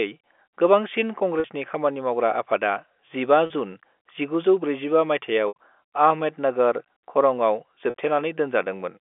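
Short held, buzzy smears interrupt the speech at 1.4 s, 3.46 s and 7.9 s, with a longer dropout at 5.48 s. Each is packet loss with pitch repetition. The receiver bridged each gap by looping the last pitch period. The gaps at 1.4, 3.46 and 7.9 s last 40 ms, which fits two 20 ms packets. The 80 ms gap from 5.48 to 5.55 s, just before "आहमेदनगर खरंआव", is longer, fading into silence before the speech returns with a short cross-fade. The 7.9 s gap comes right after "आहमेदनगर खरंआव" recurs, over narrowband G.711 telephone audio.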